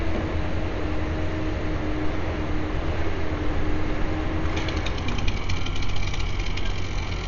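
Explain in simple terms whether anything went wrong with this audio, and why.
Dolby Digital compression is the likely culprit, running through the whole clip. Everything sounds dull, with nothing above 7 kHz, and steady tones carry a rough, fluttering hiss. A squeezed encoder discards the high end and much fine detail, and the player fills those gaps with noise.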